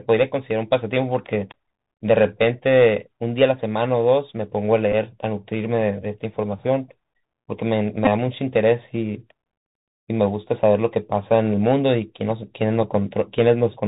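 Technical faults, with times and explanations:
Throughout: Bluetooth CVSD headset codec. The speech sounds narrowband and grainy, consistent with 64 kbps CVSD, whose one-bit delta steps cannot follow loud high sounds. S sounds turn scratchy over a granular hiss. A spectrogram shows nothing above 4 kHz and speckled noise between words.
4.92 s and 8.05–8.07 s: Bluetooth headset packet repeated. About 11.2 ms and then 15.0 ms of audio were lost, and the last packet was decoded again each time. Each gap sounds as a brief buzzy blip near 267 Hz. The waveform shows short identical repeating segments, and the spectrogram shows evenly spaced harmonic lines.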